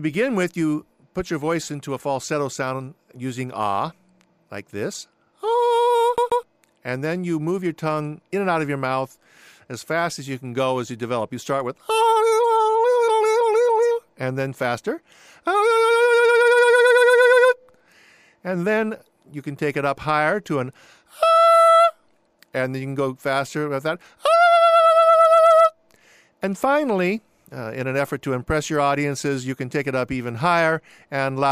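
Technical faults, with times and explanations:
6.17 to 6.43 s, CD stuck on one turn: a 132 ms slice plays twice with a brief mute at each jump, as the laser falls back one track.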